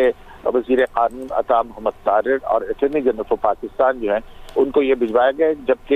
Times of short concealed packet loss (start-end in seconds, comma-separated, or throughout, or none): none